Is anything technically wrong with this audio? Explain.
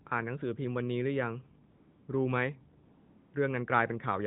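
Yes. AMR comfort noise appears at 1.70–2.08 s and 2.86–3.34 s. The sender judged the speech silent and stopped sending frames, so a steady synthetic hiss replaces the real background.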